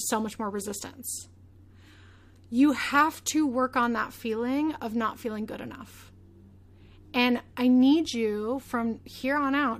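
A recording of speech, with no technical faults to report. Nothing in it points to a problem anywhere in the recording or playback chain.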